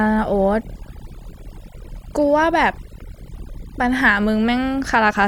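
Overdone noise removal affects the speech from start to finish. The noise reduction was set far too aggressively for a noisy source, so any frequency band sitting close to the estimated noise floor gets pulled down hard or gated out entirely. Low-level parts of the voice fall below that threshold and vanish along with the noise. The gaps between phrases drop to near silence flecked with chirping, twinkling residue.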